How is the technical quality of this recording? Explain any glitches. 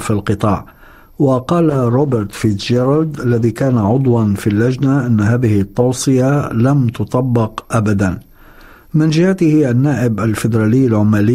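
The recording has one quality problem, a call bitrate drop from 1.74 s to 7.21 s. The connection's bandwidth estimate fell, so the encoder was forced to spend far fewer bits, consistent with a fall from around 96 kbps to roughly 16 kbps. Coding becomes coarser and the upper frequencies are trimmed away, so the sound turns muffled and watery, worst over a stretch of about 2.9 s, before the bitrate recovers and the clarity returns.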